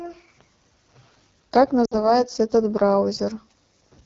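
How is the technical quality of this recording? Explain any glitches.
The quality is poor. The speech is audibly damaged throughout, with one short dropout in the middle.

Throughout the clip the speech sounds rough and raspy, with a hissy, synthetic top end. This is the AMR wideband (HD Voice) codec running at one of its lowest rates, which fits the 8.85 kbit/s mode. At that rate the pulse-driven vocal tract model is too coarse to model the speech cleanly.

From 1.85 to 2.13 s the sound smears, weakens and briefly fades, then returns roughened. This comes from lost AMR speech frames. About 60 ms of data failed, which points to three frames. The decoder repeated the last good settings with falling gain until proper frames resumed.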